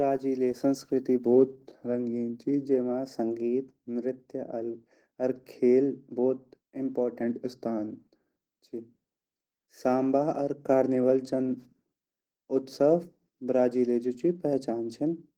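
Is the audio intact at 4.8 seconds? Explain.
No. At 4.8 seconds, as across the whole clip, the speech carries Opus voice compression damage. The encoder runs in hybrid mode, with a linear-prediction coder handling the lower band and a transform layer above 8 kHz, at a rate that points to roughly 16 kbps. Too few bits go to the excitation, so it is coded coarsely. The voice comes out plainly hoarse and slightly robotic, though the band still reaches full width.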